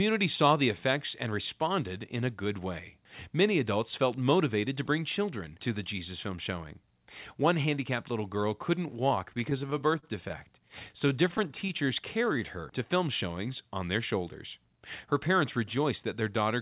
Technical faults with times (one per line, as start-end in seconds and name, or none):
9.30-11.91 repeated stalls (stutter)
11.83-12.62 jitter buffer slow-down
14.65-16.03 jitter buffer speed-up